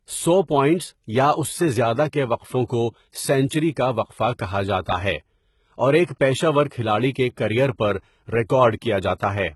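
Throughout the speech, the treble sounds synthetic: s sounds come out gritty and lispy, and nothing is present above 11.8 kHz. This is likely HE-AAC compression at a very low bitrate, around 16 kbps. Unlike plain low-pass muffling, the top stays bright, because copied-up lower bands replace the real harmonics.

Just after "اور ایک پیشہ ور", from 6.69 to 6.71 s, a short hiss runs ahead of an attack and softens it. This pre-echo comes from codec noise spread across a block that ends in a loud onset. It differs from a click or dropout because the hiss smears in before the sound, about 27 ms early.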